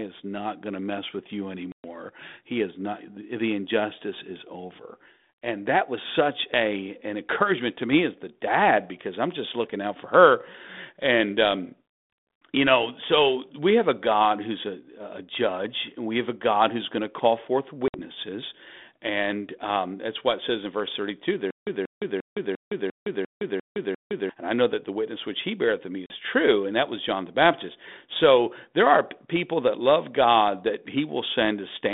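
Speech over a narrow telephone line, roughly 200 Hz to 3.6 kHz, with the light graininess of G.726 ADPCM at what sounds like the 32 kbit/s DECT rate. There's packet loss on the ADPCM call at 1.72 s, 17.88 s and 26.06 s. Chunks of about 120 ms, 60 ms and 40 ms drop out as hard-edged silence, the first spanning several packets and the others a few. Because the decoder's adaptive predictor and step size lose track of the sender during each hole, the speech comes back slightly distorted before settling. From 21.5 s to 24.3 s there's a stutter with silent gaps. The same 184 ms fragment plays eight times, each followed by about 165 ms of dead digital silence, so it repeats every 349 ms. That's likely a stalled player or stream re-playing its last buffer on each retry, and whatever should have played across those three seconds is gone.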